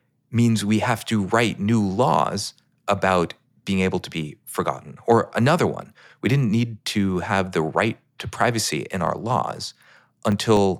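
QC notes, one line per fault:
9.07–10.57 s, periodic USB or driver dropouts: about seven gaps spaced 0.25 s apart, each losing roughly a millisecond of audio to silence as the USB bus or audio driver stalls on a fixed cycle, heard as regular ticks over the speech.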